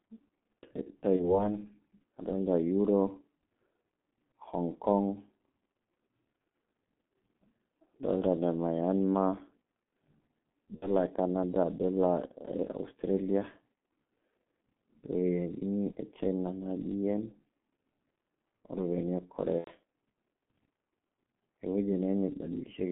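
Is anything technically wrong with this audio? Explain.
Yes. The whole speech clip has gone through a G.723.1 codec at about 6.3 kbit/s, squeezed into a phone band of roughly 200 Hz to 3.4 kHz, and it's heavily damaged. The codec rebuilds the voice from a coarse model that only refreshes every 30 ms, so fast changes get smeared. You hear a dull, boxy, hoarse voice with no air on top and consonants that lose their edges.

There's also VoIP packet loss concealed by the speech codec, in four spots: 1.17 to 1.49 s, 10.76 to 10.93 s, 15.92 to 15.98 s, and 19.58 to 19.71 s. The gaps sound like about 30, 60, 30 and 90 ms of missing audio, which fits whole 30 ms codec frames dropping out. The decoder bridges each hole by carrying its last pitch and filter forward at a falling level, so the voice is stretched into a fading buzzy tone or coloured noise. It then takes a moment to sound right again, which is why the first event lasts well beyond the gap itself.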